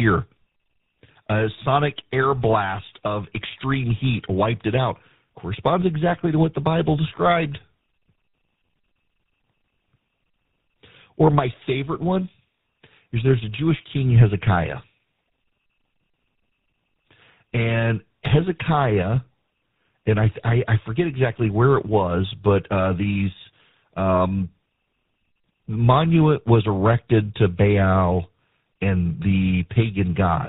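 Across the whole speech clip the voice sounds rough, muffled and warbly, with nothing above 3.8 kHz. This is tandem speech coding: the signal was coded more than once in a row, each coder working on the previous one's already damaged output. The character fits a CVSD link, then G.711 mu-law, then GSM full rate at around 13 kbit/s, so the artefacts stack beyond what any single codec would produce.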